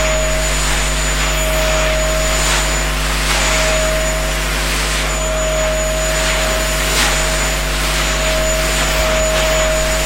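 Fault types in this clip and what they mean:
Mains hum: present throughout, a steady 50 Hz tone with a few low harmonics, about as loud as the sound itself. Power-line current leaks into the signal path, most plausibly through a ground loop or a transformer sitting close to the wiring.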